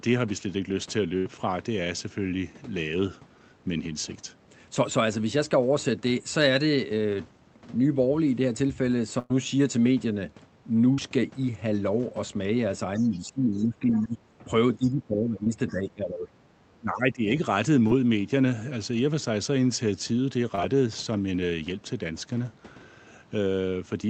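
Packet loss on a speech call shows up twice as a burst of packet loss, at 1.17 to 1.27 s and 9.19 to 9.32 s: the receiver stretched the last sound into a fading buzz or hiss, and about 80 ms and 100 ms of speech are missing. Short concealed packet loss at 10.94 to 11.00 s, 15.44 to 15.48 s, 17.88 to 17.92 s and 20.56 to 20.59 s briefly smears the sound, and each gap swallows 20 to 40 ms. An echo canceller that likely could not tell the talker from loudspeaker echo during double talk turned the talker down, so speech is suppressed in double talk at 12.97 to 14.21 s, 14.75 to 16.30 s and 16.68 to 17.41 s, dipping by about 15 dB, and more mildly at 14.41 to 14.53 s, by about 5 dB. Incomplete echo removal is the likely cause of the other side's voice leaking through at 13.14 to 13.18 s and 13.53 to 13.65 s, about 30 dB below the talker, and more clearly at 13.88 to 14.08 s, about 15 dB below. 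These scraps of voice sit underneath the suppressed speech. The call path's Opus coding limits the audio to about 8 kHz.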